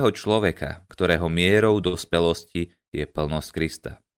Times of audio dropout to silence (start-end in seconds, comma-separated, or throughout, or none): none